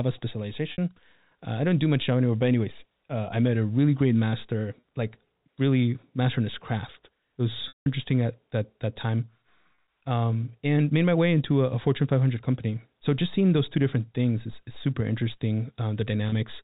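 Packet loss with pitch repetition: lost audio was bridged by repeating the last pitch period. At 0.72–0.78 s, 4.80–4.83 s, 9.75–9.78 s and 16.29–16.32 s this gives a brief buzzy hold. The 180 ms gap at 7.68–7.86 s fades to silence before speech resumes.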